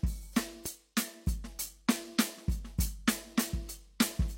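At 0.66 s a loud pop cuts into the music and is gone by 0.68 s. It is a single sharp hit, lasting only a few hundredths of a second. It peaks roughly 5 dB above the music around it. The music keeps playing underneath without a break. A pop like this comes from a sudden voltage step or pulse entering the signal path. The likely source is a plug, a switch, a static discharge or a driver glitch.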